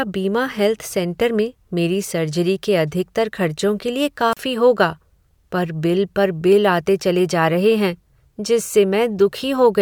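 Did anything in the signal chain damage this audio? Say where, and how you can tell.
Yes. A wireless microphone squelch dropout in the analogue radio link, ahead of any converter, interrupts the speech from 4.31 to 4.37 s. Static swells briefly, then the output falls to near silence for about 35 ms before the voice returns. The signal faded, noise rose, and the receiver's squelch muted the output. A network packet loss would instead cut cleanly or be smoothed by concealment, with no rise of hiss before the gap.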